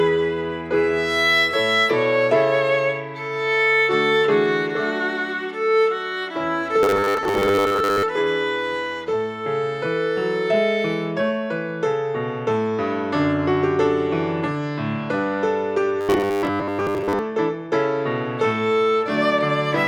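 At 6.83 to 8.04 s and again at 16.01 to 17.19 s, the sound turns into a rigid, metallic buzz pitched at 100 Hz: robotic sound from repeated short buffers. The likely cause is audio arriving too seldom, so the same 10 ms segment is replayed to fill the gaps, which fits a 10 ms buffer. Roughly two thirds or more of the real audio is skipped, leaving only a rough outline of the original.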